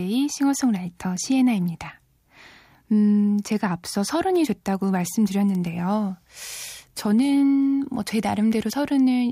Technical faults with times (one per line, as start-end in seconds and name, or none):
none